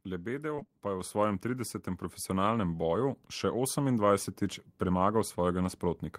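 In this speech clip, packets were repeatedly lost or late between 0.55 and 0.70 s, just before "pa je". Each hole, none longer than about 20 ms, was patched by extending the preceding sound, leaving that stretch choppy and robotic with nearly half of it concealed. Then, at 1.01 s, right after "pa je", the call software raised the microphone input volume in one step, so voice and background jump up together by about 5 dB.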